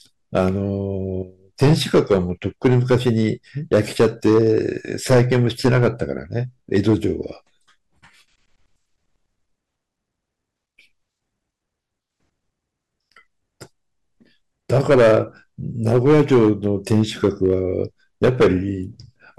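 Hard clipping runs through the whole speech clip. The level drives about 13 dB past what the stage can pass, so roughly three percent of samples are flattened at the ceiling. Each loud syllable picks up a harsh, gritty fuzz from the high harmonics those squared-off peaks create.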